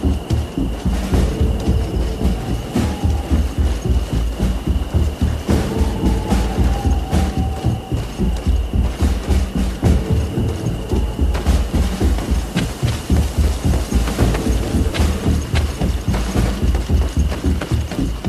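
A single fault occurs at 7.29 s: a short blip of under 20 ms that breaks abruptly into the audio. It is the signature of damaged data in a compressed stream. A small stretch of the encoded bitstream there is corrupt, so the decoder cannot parse the affected frame correctly, loses frame sync, and searches for the next valid frame header before locking onto it and resuming normal decoding.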